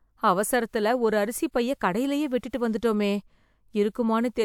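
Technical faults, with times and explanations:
No technical faults can be heard in this speech.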